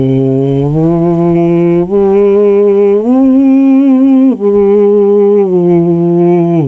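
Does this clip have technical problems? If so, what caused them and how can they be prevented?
Yes. The music shows gain pumping from start to finish. The swing is around 10 dB. Loud and soft passages sit too close in level, so the music sounds squashed. The likely cause is input gain set far too high, with a fast limiter or compressor clamping down on every peak. The top end stops near 8 kHz, which fits a G.722 call path. To prevent the pumping, lower the input gain so the limiter rarely has to act.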